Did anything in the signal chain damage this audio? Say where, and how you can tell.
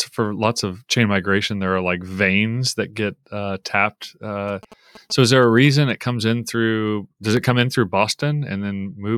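Yes. Between 4.48 and 5.91 s, after "that get uh tapped" and before "it comes in", the analogue wiring picks up GSM signalling bursts: a galloping run of ticks and buzzes at about 217 Hz, roughly 20 dB under the speech. A nearby phone's radio bursts are being rectified by the audio circuitry.

From 6.88 to 7.61 s, just after "it comes in", four short ticks, each well under a millisecond, point to CD scratch ticks at the storage and playback stage. Once per disc revolution, the damage exceeded error correction, and the player patched the lost samples.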